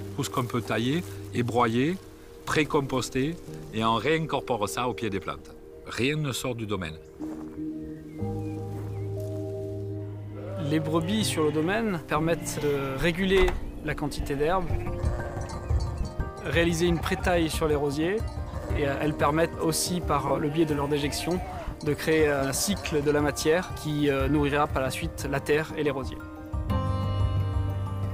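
Lost LE Audio frames occur three times: at 3.70 to 3.72 s, at 15.29 s and at 20.28 to 20.31 s. Each time, Bluetooth LE Audio frames fail to arrive and the LC3 decoder fills the gap by reusing the previous spectrum with randomised signs. The gaps last about 20, 10 and 30 ms, which fits two, one and three 10 ms frames. In each one, the sound turns briefly into a noisy smear of its own recent texture.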